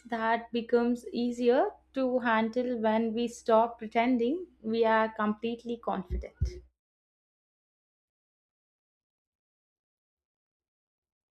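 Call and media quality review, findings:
De-emphasis applied wrongly, 0.00 to 6.71 s. Speech dull, muffled; treble slopes smoothly down, about 8 dB lower at 10 kHz than at 1 kHz. Probable receive-side filter stage: treble-cut reversing pre-emphasis applied to audio lacking it, or applied twice.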